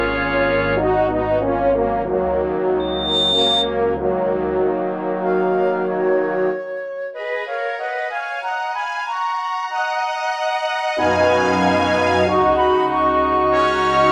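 Loudspeaker feedback squeal from 2.79 to 3.78 s: a microphone is hearing its own loudspeaker, and at 3.6 kHz the loop gain tops one, so that tone feeds on itself, swelling over roughly 0.4 s into a piercing whistle about as loud as the surrounding sound.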